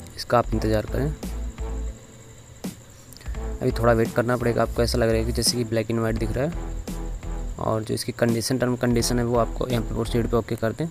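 Nothing goes wrong anywhere in the clip, so there's no technical fault here to point out.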